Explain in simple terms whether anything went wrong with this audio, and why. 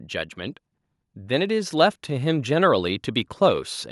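Yes, there is one problem: automatic gain rising. From about 1.27 s to 3.69 s, the recording level creeps upward, so the speech and the background noise both get steadily louder together. The automatic volume control judged the input too quiet and gradually turned it up.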